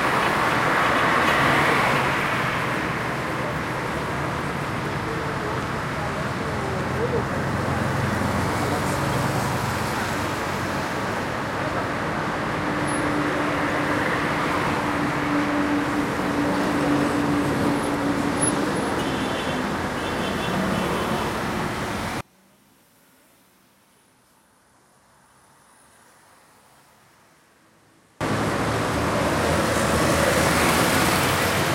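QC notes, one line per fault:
22.21–28.21 s, one channel inverted: the sound drops by about 32 dB for six seconds, leaving a faint residue. This is likely one stereo channel with reversed polarity, so the content common to both channels cancels in the mono sum and only their small difference remains.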